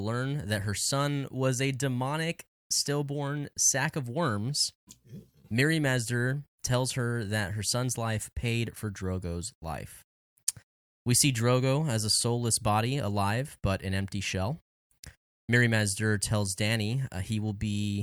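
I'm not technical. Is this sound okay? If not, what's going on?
Yes, nothing here needs fixing; no technical faults turn up anywhere in the recording.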